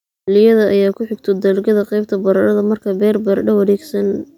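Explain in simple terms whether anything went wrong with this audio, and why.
Nothing went wrong; there's no fault to hear here.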